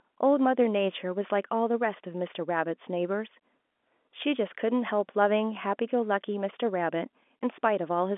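No technical faults occur at any point in the speech, which comes through the narrow G.711 telephone band with nothing above about 3.7 kHz.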